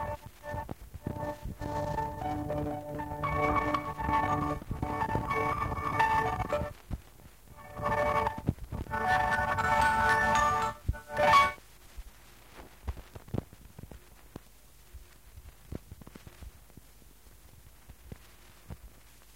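From 4.43 s to the end, crude rate conversion is heard. Samples were simply dropped, with no filtering. The pattern fits a 48 kHz to 44.1 kHz change. The errors sit roughly 25 dB below the sound and add a gritty, inharmonic fizz on loud, bright passages.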